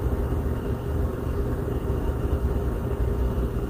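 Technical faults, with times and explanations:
No technical faults can be heard anywhere in this clip. Nothing in the audio calls for a time or an explanation.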